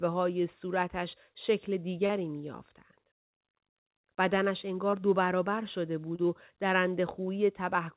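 At 6.16 s, running to about 6.23 s, there is a short concealed packet loss. About 30 ms of the call arrived too late for the decoder, and the receiver covered roughly 25 ms of it by extending the preceding sound before blending back into the real signal, adding a few milliseconds of delay. Unlike a plain dropout, there is no silent hole, only a brief smear. The band-limited call sound stops at 4 kHz.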